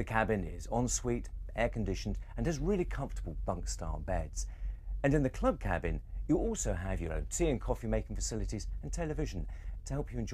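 No technical faults can be heard anywhere in the audio.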